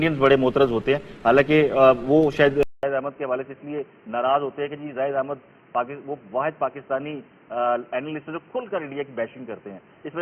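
At 2.63 s the sound cuts out for 200 ms, then returns duller and boxier, noticeably quieter (roughly 10 dB down), and with a new background hiss sitting about 35 dB beneath it. From there to the end nothing is left above 3.1 kHz. This points to the input switched to a poorer device, likely a second microphone or a headset's call profile, which passes a narrower band and brings its own level and noise floor.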